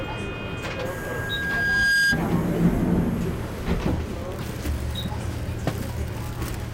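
Everyday sounds here, and from 0.69 s to 2.23 s there's a loudspeaker feedback squeal: a pure tone at 1.6 kHz that swells over roughly a second and a half until it sits about 5 dB above the rest of the sound. That's the classic loop where a mic hears the speaker it's driving, and at that one frequency the round-trip gain tops unity, so the tone keeps feeding itself until something breaks the loop.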